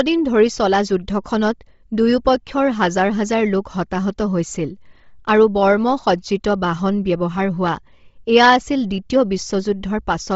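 Right from the start and all the way through, the speech has a breathy, grainy edge and nothing above 7.7 kHz. That's likely Bluetooth LC3 compression working hard, which fits a low bitrate around 24 kbps: upper bands get zeroed and filled with noise.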